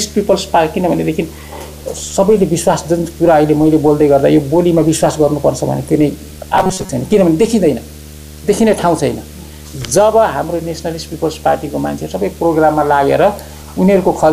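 Video or display buzz runs from start to finish: a steady buzz at 75 Hz, the field rate of the picture, with a layer of gritty hash above it, sitting around 20 dB below the sound itself. It points to a screen or video cable leaking its refresh signal into the audio path, so the interference keeps time with the display rather than with anything in the recording.

From 6.58 to 6.90 s the audio turns rigid and metallic, locked onto a fixed 188 Hz buzz that only loosely follows the original sound's shape. The likely cause is robotic sound from repeated short buffers: new audio stopped arriving often enough, so the software kept replaying the last short slice, about 5.3 ms long, which sets that 188 Hz pitch. Most of the audio in that window was covered this way, and the real material underneath was skipped.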